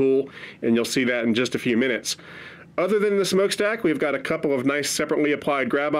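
No technical faults are audible.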